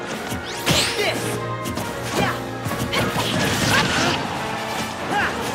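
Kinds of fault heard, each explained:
No audible faults detected.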